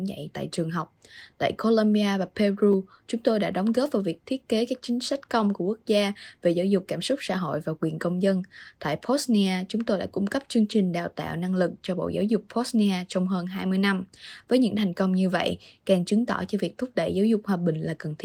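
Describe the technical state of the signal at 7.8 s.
At 7.8 s the speech is intact, with no dropout, distortion or other fault, and the Opus voice compression carrying it leaves only light coding traces.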